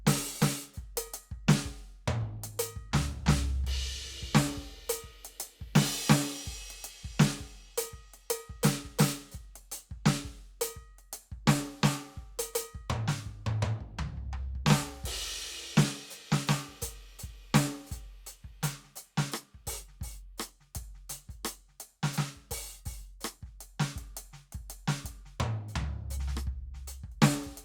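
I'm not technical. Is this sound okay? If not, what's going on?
Yes, this music sounds fine, with nothing going wrong anywhere in it. There are no technical problems to point out, so there's nothing here you need to worry about.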